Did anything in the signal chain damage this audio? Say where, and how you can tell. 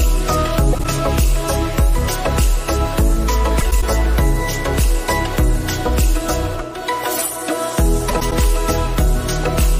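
Yes. Frames out of order, introduced in transport (network/packet stage): garbled flutters at 0.73–0.85 s, 3.60–3.83 s and 8.09–8.32 s. Two adjacent blocks, 52 ms each in the first and 104 ms in the others, played swapped, with no time lost.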